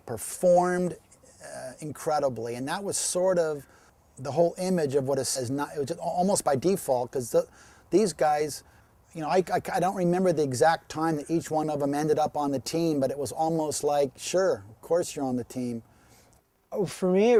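At 5.35 s the audio makes a skip ahead: about a second of material is simply thrown away while later audio was already waiting, and playback jumps straight to later audio with no fill between. The two sides are butted together, so the sound lurches abruptly forward. On a waveform there is no gap, just a sudden change in envelope at the join. A spectrogram shows a hard vertical seam where the harmonic and energy patterns do not line up.

From 5.49 s to 9.02 s a jitter buffer speed-up follows. The receiver is still holding more audio than it wants, so it repeatedly cuts out short pieces, each one or a few pitch periods long, removing roughly 0.4 s in total. Playback runs at about 110% of normal pace with the pitch unchanged, and the sound comes across as hurried. A spectrogram keeps its harmonic spacing while events crowd closer in time. The waveform shows splice points, each where a cycle was dropped.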